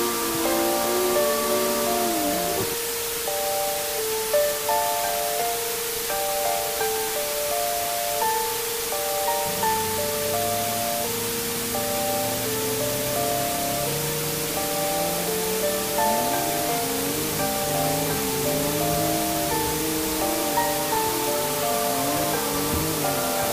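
From start to finish the audio carries low bit depth with dither: it has been reduced to about 3 bits, with random dither added before rounding, so the quantisation error turns into a constant, even hiss instead of distortion. Here the hiss sits at roughly the same level as the sound itself. On a spectrogram it shows as a flat, uniform wash across all frequencies, and the waveform looks thickened by a steady noise floor that never drops.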